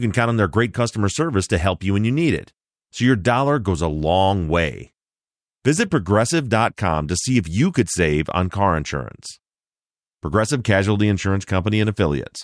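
No technical faults are audible.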